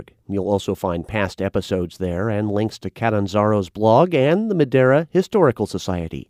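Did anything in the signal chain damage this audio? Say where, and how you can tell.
No, nothing in the signal chain damaged this audio that can be heard anywhere in the clip.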